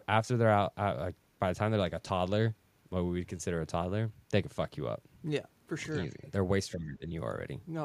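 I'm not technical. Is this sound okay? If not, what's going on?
No. At 6.19 to 6.23 s there is a brief, very quiet trace of a second voice, the other side's voice leaking through. This is likely from the caller's loudspeaker being picked up by their microphone and not fully removed. Unlike the later problem, something is added here.

From 6.74 to 7.11 s, about 0.4 s in all, the talker's own voice is turned down and dips clearly in loudness. This is speech suppressed in double talk, likely because the echo remover mistook talking for echo while both sides spoke. Here the voice is reduced, with nothing added.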